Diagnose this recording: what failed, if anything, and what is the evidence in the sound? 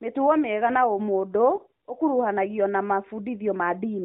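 The network stage failed: one lost AMR speech frame between 1.56 and 1.60 s, after "mĩega na ũmũndũ" and before "ũkũruhanagio na". A radio error corrupted the frame, so the decoder repeated the previous frame's pitch and vocal-tract settings at reduced gain. The sound is a brief dip or warble lasting about one 20 ms frame. Unlike a buffer dropout there is no hard silence or click. The narrowband codec carries the speech throughout, with nothing above 4 kHz, and its light coding texture fits the top 12.2 kbps mode.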